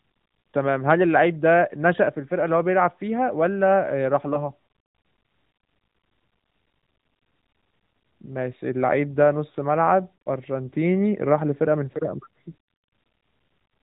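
At 4.34 to 4.50 s, lost AMR speech frames cause a brief dip or warble as the decoder conceals one missing 20 ms frame. It repeats the previous frame's settings, then the sound recovers weak or rough for a moment.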